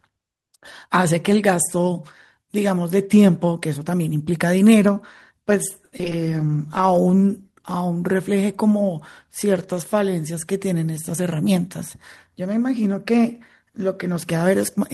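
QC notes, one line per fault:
5.85–6.13 s, repeated packet loss (robotic sound): four gaps in under a third of a second, the longest 70 ms, each patched by stretching the preceding sound, so about 36% of the span is concealment. The speech turns choppy, with pieces missing.
6.2–7.8 s, call bitrate drop: the encoder rate falls from 32 to 18 kbps and stays at the low rate for about 1.5 s. Coarser coding at that rate makes the speech sound rough and watery, with the top end dulled, until the rate climbs back.
11.13–11.63 s, jitter buffer speed-up: to shed excess buffered delay, the receiver cuts short pitch-period pieces repeatedly, removing roughly 70 ms in half a second. The speech runs at about 111% speed with unchanged pitch, so it sounds briefly hurried.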